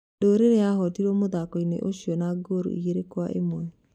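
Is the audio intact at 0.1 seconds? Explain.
Yes, the speech at 0.1 seconds is intact, with no fault audible at that moment.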